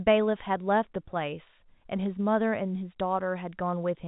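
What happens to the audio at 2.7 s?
Nothing goes wrong at 2.7 s: the speech carries straight through that moment with no break or glitch, still with the narrow, telephone-like band of the G.711 coding it runs through.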